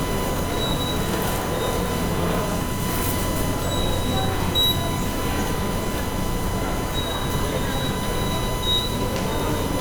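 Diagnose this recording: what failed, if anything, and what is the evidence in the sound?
The failure is in the analogue wiring, at the power and ground path. A steady USB whine runs through the whole recording. It sits at a fixed pitch of 1 kHz, where it is strongest. It is loud, not far below the sound itself. The mechanism is the USB bus drawing current in 1 ms frames. That pulsing load leaks into the audio through shared power or ground, producing a tone at the frame rate.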